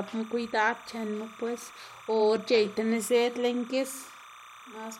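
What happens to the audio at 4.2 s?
At 4.2 s you're hearing timecode bleed, and it isn't confined to that moment; it runs under the speech for the whole clip. Linear timecode from a nearby track or cable is leaking in, a square wave flipping between tones around 1 and 2 kHz at a 30-frame rate. It sits roughly 20 dB below the speech, so you get a steady chirpy warble chattering away in the background right through that point.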